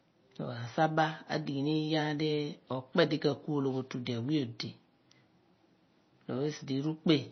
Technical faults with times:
0.00-7.31 MP3 compression

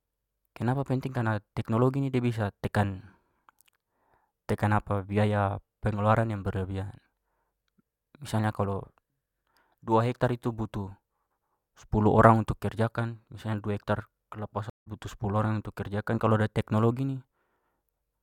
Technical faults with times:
14.70-14.88 stream reconnect

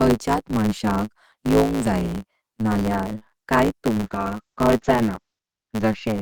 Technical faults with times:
0.00-6.21 block size mismatch (truncated)
3.95-6.21 call bitrate drop

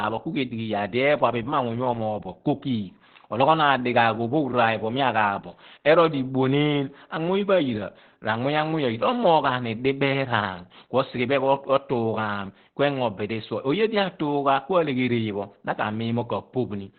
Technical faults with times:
0.00-16.98 Opus compression

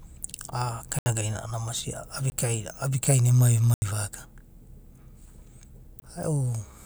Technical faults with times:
0.99-1.06 block of digital silence
2.30-2.32 block of digital silence
3.74-3.82 block of digital silence
6.00 block of digital silence

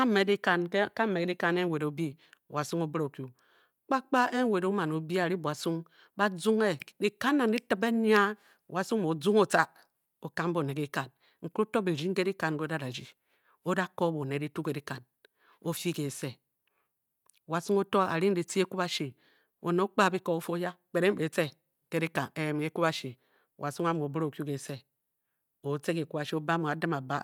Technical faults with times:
none

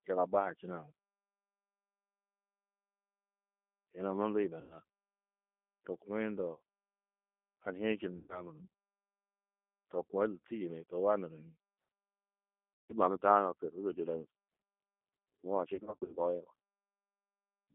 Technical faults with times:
0.00-17.74 G.729 codec
4.61-4.77 VoIP packet loss concealed by the speech codec
6.55-6.60 VoIP packet loss concealed by the speech codec
8.17-8.46 VoIP packet loss concealed by the speech codec
12.79-12.93 VoIP packet loss concealed by the speech codec
15.75-16.20 VoIP packet loss concealed by the speech codec

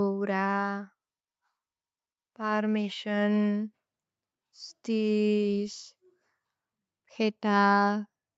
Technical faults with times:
0.05-1.01 automatic gain falling
2.36-3.80 automatic gain rising

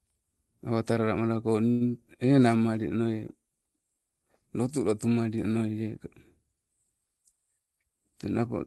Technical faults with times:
1.71-1.82 short stall from a late packet
7.37-8.05 jitter buffer speed-up

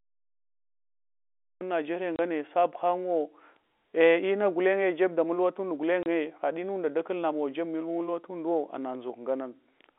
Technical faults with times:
0.00-1.61 cut-off start
2.16-2.19 packet loss filled with silence
6.03-6.06 packet loss filled with silence

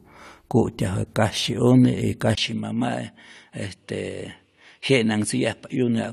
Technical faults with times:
2.35-6.13 input switched to a poorer device

